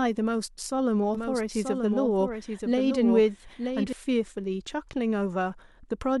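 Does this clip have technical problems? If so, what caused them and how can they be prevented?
Yes. From 1.15 to 3.93 s there's a doubled audio track: a dry copy of the speech trailing about a second behind, a few dB down, cutting in and out abruptly. It's likely the signal got captured twice via a slower path. Route each source into the mix only once.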